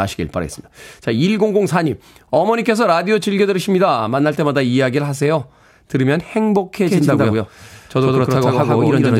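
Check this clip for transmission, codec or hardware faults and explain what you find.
One fault is present: a doubled audio track. It starts abruptly at 6.87 s and lasts to the end of the clip. From that point the speech is heard twice. A second full-band copy trails the original by roughly a tenth of a second, at about the same level. The likely cause is the same audio entering the mix twice, once through a slower path. The copy has no decay or room colour. It sounds like a hard, flat echo.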